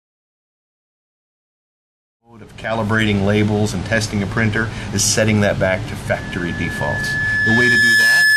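After the fade-in completes at 3.28 s, loudspeaker feedback squeal begins at 6.07 s and runs to the end: a 1.7 kHz tone swells over about two seconds until it sits roughly 5 dB above the signal, as the microphone–loudspeaker loop's gain exceeds one at that frequency.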